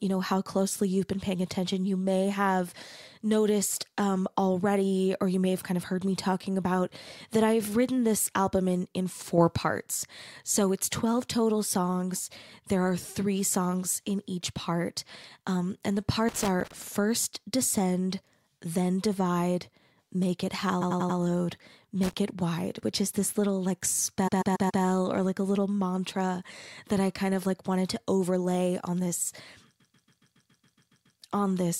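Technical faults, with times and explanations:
9.38–9.55 s, sudden gain jump: sound and background noise step up together by about 6 dB and hold for about 0.17 s. The abrupt level change with no ramp most likely comes from a gain setting or bit shift applied between one sample and the next.
16.29–16.74 s and 22.03–22.13 s, loose connector crackle: irregular scratchy bursts, the first after "part um and the" and before "first descend then divide". A worn or dirty contact was making and breaking, chopping the signal and popping on any DC present.
20.81–21.18 s, 24.27–24.82 s and 29.79–31.19 s, repeated frames: stutters where the same block plays again, the first after "then divide make it" and the last after "to overlay on this". The blocks are 92.9 ms, 139.3 ms and 139.3 ms, which fits a few compressed frames sent more than once. The repeats lengthen the audio by 0.37 s, 0.56 s and 1.39 s.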